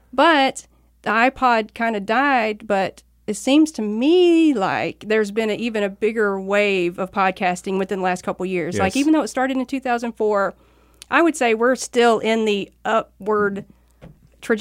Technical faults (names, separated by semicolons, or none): none